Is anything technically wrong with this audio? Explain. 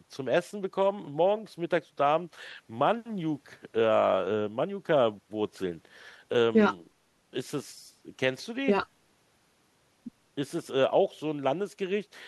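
No, nothing technically wrong can be heard here.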